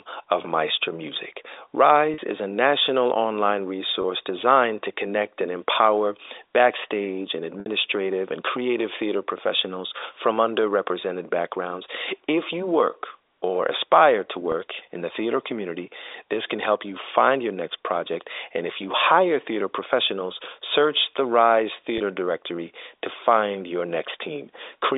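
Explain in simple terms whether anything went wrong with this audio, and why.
Packet loss with pitch repetition causes five brief glitches, at 2.14 to 2.18 s, 4.02 s, 7.60 to 7.66 s, 14.52 s and 21.98 s. Small pieces of the audio, lasting from 20 to 60 ms, never arrived. The receiver filled each gap by repeating the last fragment of sound, so the voice briefly holds a slightly buzzy tone, and in the longest gap it fades into silence before the speech returns. The gap at 7.60 s is the longest, consistent with about three lost packets. All of this travels over a normal telephone-band line.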